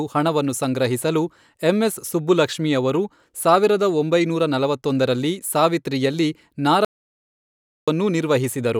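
After "ಸಾವಿರದ ಒಂಬೈನೂರ ನಲವತ್ತೊಂದರಲ್ಲಿ ಸಾವಿತ್ರಿಯಲ್ಲಿ", an audio dropout to silence runs from 6.85 to 7.88 s, likely a lost input. Speech stops dead, leaving a flat-line waveform and an empty spectrogram.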